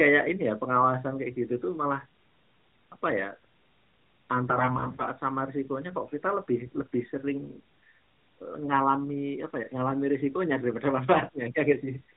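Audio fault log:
4.50–5.07 s: AMR bit errors. Weakly protected bits in the mobile speech frames arrived flipped, at a rate of roughly 7 percent, yet the check on the key bits passed, so misplaced pulses and wrong gain and spectrum values make speech hoarse, scratchy and gargly while pitch and level hold.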